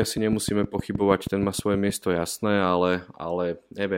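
A train of clicks runs from 0.03 to 1.91 s in this speech recording, about fifteen sharp, near-identical ticks arriving at a steady 6.4 per second. Each click peaks roughly 15 dB above the surrounding signal, so the ticking sits clearly on top of the speech and stays audible through any gaps. Such a regular, repeating pulse is likely interference from nearby equipment or a faulty connection or power supply, injecting the same transient again and again.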